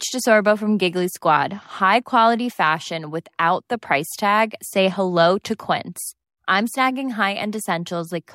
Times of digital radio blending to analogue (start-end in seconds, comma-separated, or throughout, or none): none